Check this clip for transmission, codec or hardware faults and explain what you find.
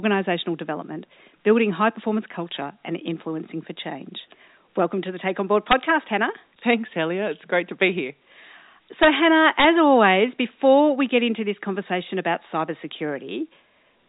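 One fault appears: integer overflow, heard three times in this speech. At 5.71 s, 9.03 to 9.07 s, and 9.60 to 9.64 s (just before "always before we get"), a gain stage pushed peaks about 2 dB past the integer ceiling, about 3 dB on the last. Instead of clamping, those samples wrapped to the opposite extreme, so each one jumps across the full range. The result is a sharp, violent crack on loud syllables, far harsher than clipping. The G.711 A-law telephone band limit stays in place beneath these cracks.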